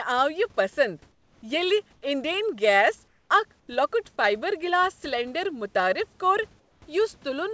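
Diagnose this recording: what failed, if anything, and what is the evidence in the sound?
Comfort noise in place of the background at 1.12–1.42, 3.08–3.30, 3.60–3.68 and 6.60–6.82 s. The background turns flat and featureless, about 4 to 6 dB quieter. Likely discontinuous transmission in call processing.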